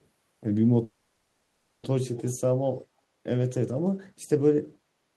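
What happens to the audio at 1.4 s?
A call audio freeze runs from 0.83 to 1.85 s, so at 1.4 s the speech is stalled. For about a second the last sound before the stall is stretched into a fading buzzy hiss that never drops to silence. The likely cause is packets held up in transit, which drained the jitter buffer until the receiver had only that sound to extend. When delivery resumes, speech picks up where it stopped with nothing lost, now running about a second late.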